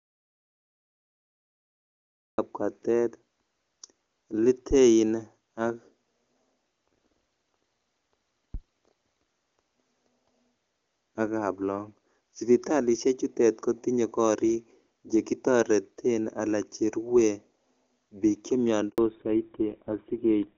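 The recording opens in audio dropout to silence: from the first instant until 2.38 s there is nothing at all, not even room tone. The speech enters abruptly at 2.38 s rather than building up, so whatever preceded it is simply missing. The likely cause is a lost input, such as a device not yet connected, a broken link or a mute, while the encoder kept writing silence.

At 4.71 s and again at 8.54 s there is a phantom power thump, a low, dull knock of the kind produced when a supply voltage is switched on a live input and the step passes through the coupling capacitors. Each disturbance lasts a little over a tenth of a second, about 0.14 s and 0.12 s respectively. The thump itself dies away quickly, in about 32 ms at 4.71 s and about 26 ms at 8.54 s, which makes them short, dull knocks rather than rumbling booms.

At 18.90 s a handover gap cuts the speech for 80 ms. The sound falls away rapidly and then sits in silence until the new connection delivers audio again. 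The call was being passed between networks, and during the switch no speech frames arrived, so that fraction of the talk is lost, not just muted.

Right after the gap, from 18.98 s to the end of the clip, the call goes through a fallback to narrowband. Up to this point the AMR wideband (HD Voice) codec at 23.85 kbit/s carried the speech cleanly, with full presence above 4 kHz. After the switch nothing above 4 kHz survives, and the speech turns muffled and coarser. This fits a drop to the GSM full rate codec at 13 kbit/s.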